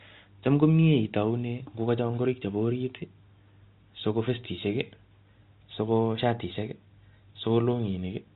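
No technical faults can be heard in this speech; it carries the narrow telephone band that stops at 4 kHz, which fits ordinary 64 kbps G.711 A-law coding working as intended.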